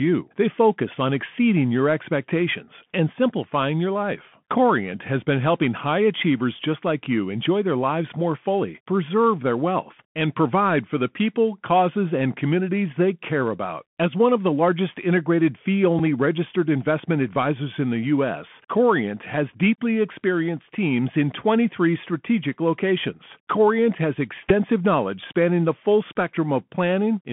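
Bluetooth CVSD headset codec damage runs through the whole clip. The speech is squeezed into a band of roughly 150 Hz to 3.4 kHz, which fits a 64 kbps CVSD link: one bit per sample nudging the waveform up or down with an adapting step. Loud bright passages outrun that step and distort, s sounds come out scratchy, and a grainy hiss sits under the speech.

Bluetooth headset packet repeated at 15.99 s: about 7.5 ms of audio went missing, consistent with two lost packets, and the old packet's bits were decoded again in their place. Over this short run the repeat every 3.75 ms gives a buzz near 267 Hz until good packets return.

Bluetooth headset packet repeated again from 24.49 to 24.52 s, covering about 11.2 ms, which points to three lost packets. The same stale packet replays at a 3.75 ms spacing, leaving a buzz near 267 Hz until good packets return.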